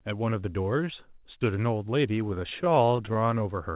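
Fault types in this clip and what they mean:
Repeated stalls (stutter): between 2.28 and 3.42 s the speech catches and drags through 18 brief hitches, each at most 21 ms, adding about 0.2 s. Late packets kept draining the jitter buffer, so the last sound was held until playback could continue, losing nothing.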